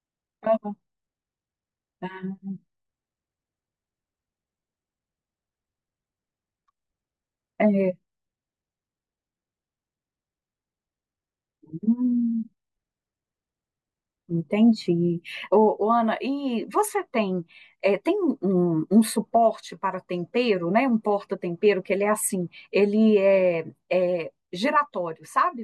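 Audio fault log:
No faults heard.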